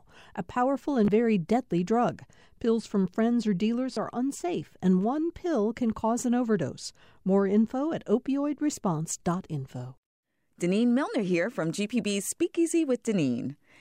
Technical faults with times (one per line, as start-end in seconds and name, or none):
1.05-1.08 Bluetooth stutter
3.94-3.97 Bluetooth stutter